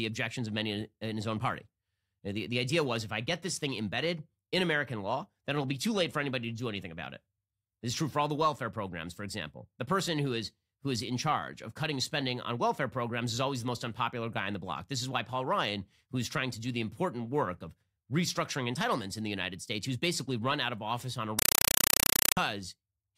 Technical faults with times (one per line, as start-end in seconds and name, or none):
21.39-22.37 compressed stream played as audio